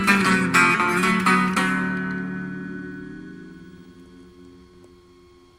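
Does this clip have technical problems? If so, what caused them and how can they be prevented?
No, no technical problems can be heard here.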